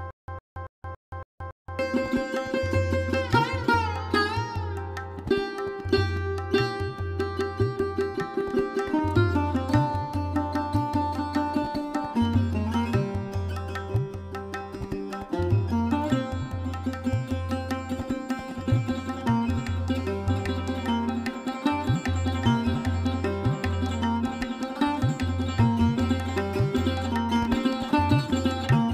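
From the very start until 1.79 s there is a stutter with silent gaps: a 106 ms burst repeats six times, separated by about 175 ms of digital silence, so it returns every 281 ms. This likely comes from a stalled stream replaying its last fragment. The waveform shows identical blocks with flat gaps between them, and the spectrogram shows matching columns.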